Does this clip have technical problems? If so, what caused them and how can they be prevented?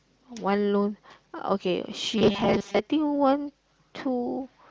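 Yes, there's robotic sound from repeated short buffers between 2.18 and 2.79 s: a rigid, metallic 200 Hz buzz. That's likely the playback side looping a 5 ms chunk while fresh audio arrived late, with most of that stretch repeated instead of real signal. A larger jitter buffer and steadier packet delivery would prevent it.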